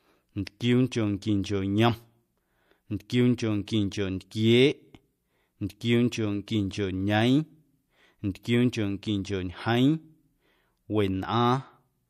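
At 0.45 s and again at 3.66 s, pre-echo smears a sharp speech onset. A short hiss, about 13 dB and then about 11 dB above the surrounding floor, rises roughly 18 to 19 ms before each attack. That points to a transform codec keeping a long block of about 36 ms instead of switching to short blocks, spreading the attack's quantisation noise back into the quiet lead-in.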